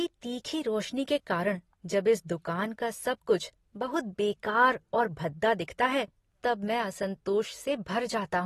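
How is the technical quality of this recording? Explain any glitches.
The recording has audible codec damage throughout. Likely AAC compression, at an AAC-LC rate around 32 kbps, cut everything above 12.4 kHz and coarsely quantised the rest, so the speech sounds dull, smeared and fizzy.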